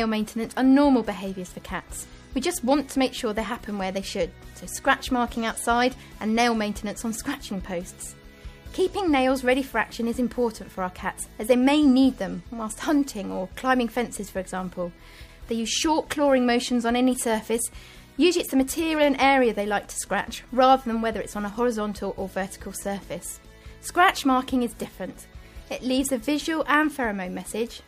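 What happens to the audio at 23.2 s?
Nothing goes wrong at 23.2 s: the audio runs through that moment intact, with no dropout, click, distortion or other fault.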